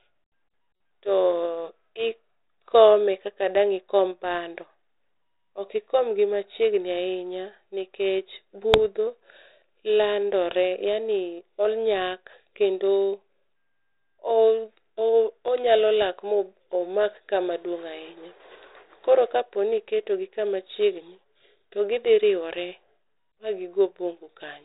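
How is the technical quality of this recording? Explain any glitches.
Two short glitches break up the speech, both bit errors on an ADPCM link. The band stops at 4 kHz with light coding grain, which fits a 32 kbit/s G.726 cordless-style link.

Just after "ahinya nikech", from 8.74 to 8.79 s, a rough, popping burst with a brief level change interrupts the speech. A second click comes at 16.02 s. Flipped bits corrupt the decoder's step size and prediction, so each error rings on briefly, the first from a denser cluster of errors.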